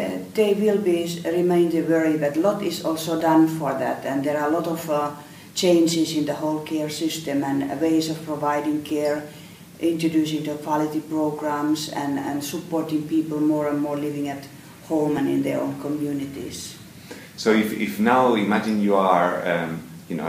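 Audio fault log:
3.20 s and 15.18 s, audio missing between chunks: at each point the sound jumps forward abruptly, as if a sliver were snipped out and the two sides butted together with no gap of silence. Roughly 15 ms goes missing each time, brief enough to register as a small skip rather than a dropout. The likely cause is a recorder or processor working in 6-second chunks and losing a fragment while closing one and opening the next.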